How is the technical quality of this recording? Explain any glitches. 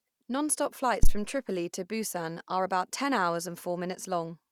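One glitch stands out. At 1.03 to 1.12 s there is a phantom power thump. A supply switching on or off on the live input sends a step through the coupling capacitors. It gives a deep thump peaking around -9 dBFS, fading within about 19 ms.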